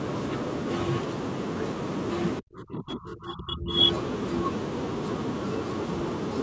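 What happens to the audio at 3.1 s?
At 3.1 s the speech is caught in a stretch from 2.4 to 3.77 s where it dips deeply, by roughly 30 dB. This is likely speech suppressed in double talk: an echo canceller, confused by simultaneous talk, turned down the near talker. Unlike a packet dropout, the level is pulled down by processing rather than lost in transit.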